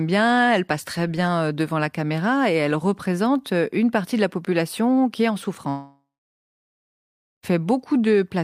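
Speech, with a long network dropout from 5.69 s to 7.45 s, right after "population qui est en". The last sound is stretched into a fading buzz or hiss. Then about 1.4 s of silence follows. The audio resumes at 7.45 s, but roughly 1.7 s of speech never arrives and is simply gone. The likely cause is a network stall. The receiver filled the gap by extending the last sound, then fell silent until packets flowed again.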